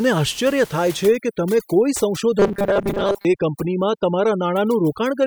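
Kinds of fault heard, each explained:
overdone noise removal: From 1.05 s on, frequency bands near the noise estimate are pushed far down or switched off, so the background drops and breaks up into twinkling specks. Unlike steady room noise, the specks flicker with the signal.
robotic sound from repeated short buffers: Between 2.39 and 3.26 s the speech becomes a rigid metallic buzz at 200 Hz, likely from audio arriving too seldom, so a 5 ms stretch is replayed over most of the real audio. Unlike watery noise-removal artefacts, it holds one fixed pitch.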